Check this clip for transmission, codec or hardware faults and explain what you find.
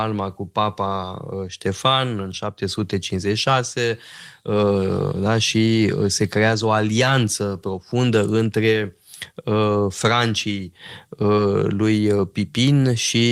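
One fault is audible: a short concealed packet loss from 11.35 to 11.39 s. The speech briefly smears and wobbles there. About 20 ms of audio arrived too late to decode, so the receiver extended the preceding sound over the gap and then blended back into the real signal.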